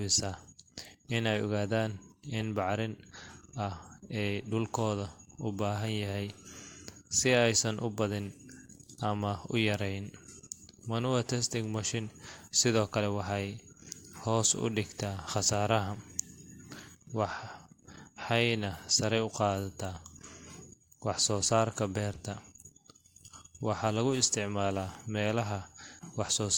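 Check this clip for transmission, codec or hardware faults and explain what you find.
The speech has three decoded corrupt frames, brief events where damaged compressed frames were played anyway. Flipped bits in each frame made the decoder misread gains or codes and put energy at wrong frequencies for about one frame. At 7.73 s, just before "u badin", a single frame produces a brief glitch near -45 dBFS. At 10.30–10.32 s, after "u yareyn", about two frames give a quieter glitch near -50 dBFS. At 22.13–22.17 s the loudest one, near -35 dBFS, is a short glitch.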